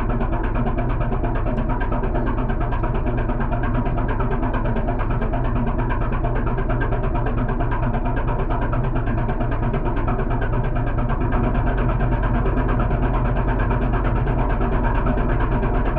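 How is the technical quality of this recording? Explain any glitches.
There's one real problem here. From 11.34 s to the end, a doubled audio track kicks in: a second, full-band copy trails about a second and a half behind, roughly 5 dB down, with no decay or room sound. It switches on abruptly, likely from a second, slower capture path getting mixed in.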